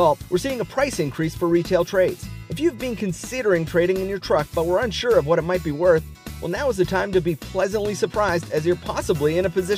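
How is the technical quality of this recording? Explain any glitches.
No glitches turn up anywhere in the recording, and nothing interrupts or distorts the audio at any point. What comes through is steady and continuous, with no dropouts, clicks or sudden changes to explain.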